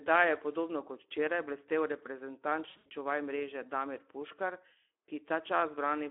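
The whole clip runs through the Speex codec, and the coding damage is plainly audible: the speech sounds hoarse and grainy because the encoder has too few bits to model the excitation properly. That fits a setting around 11 kbps, squeezed into a 300 Hz to 3.4 kHz phone band.

From 2.69 to 2.89 s there's VoIP packet loss concealed by the speech codec. About 140 ms of audio goes missing across a 160 ms stretch, with the longest gap lasting 80 ms. The decoder fills those gaps by stretching the last stretch of sound into a fading buzzy tone or coloured noise, and the voice stays weak and smeared for a moment after the packets return, into "čuvaj mreže".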